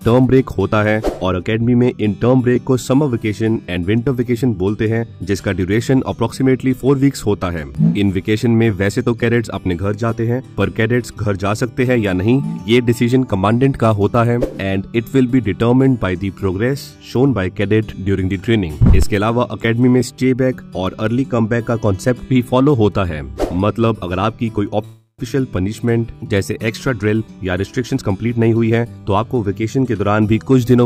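At 24.85 s the audio stalls into a fading buzz or hiss, then silence, until 25.21 s. It resumes where it stopped. This call audio freeze likely came from delayed packets.

From 26.90 to 29.43 s a jitter buffer speed-up plays the audio at 113% speed, same pitch. About 0.3 s is trimmed away.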